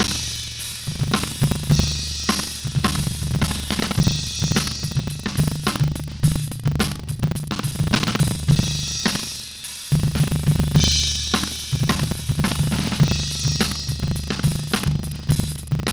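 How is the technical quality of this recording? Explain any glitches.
The recording is marred by one persistent fault. Buffer tearing runs throughout: writer and reader pointers have slipped, so about a fifth of each 40 ms buffer replays audio roughly 70 ms old, producing a rattling 25 Hz buzz while sound plays. Waveforms show hard steps at each join; spectrograms show regular vertical streaks.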